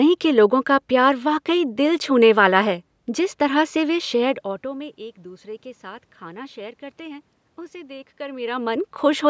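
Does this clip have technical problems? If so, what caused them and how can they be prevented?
No, there are no technical faults.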